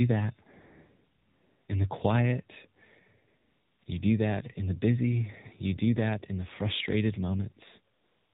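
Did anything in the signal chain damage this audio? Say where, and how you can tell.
Yes. The codec stage did it: AMR narrowband mobile codec damage runs throughout. Nothing passes above 4 kHz, and the speech sounds buzzy and synthetic, a sign the vocal-tract model had very few bits, which points to about 7.4 kbps. A simple 8 kHz resample would be dull but clean, not buzzy.

The same codec's silence handling adds AMR comfort noise at 0.60–1.68 s (before "in the quiet"), 3.28–3.82 s and 3.84–3.86 s (both before "you do that in"), and from 7.94 s to the end. The real background is swapped for smooth synthetic noise that switches in and out. A noise gate would drop to silence instead.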